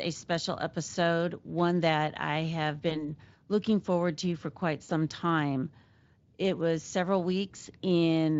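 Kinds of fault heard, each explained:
VoIP packet loss concealed by the speech codec: Voice packets failed to arrive, so the Speex decoder filled each gap by extending its last pitch and spectral shape at falling gain. After "one that I have", near 2.89 s, a gap of about one 20 ms frame becomes a brief smear that lingers to 3.03 s. After "forward to for quite", at 4.83 s, roughly 60 ms is stretched into a fading sound, and the voice stays weak or distorted for a while after packets return.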